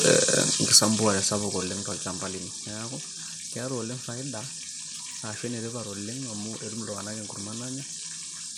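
From about 0.05 to 2.62 s, the automatic gain control judges the input too loud or its background noise too strong and steadily pulls its gain down by about 15 dB. The result is automatic gain falling: the speech starts loud, then sinks gradually, its background fading down along with it.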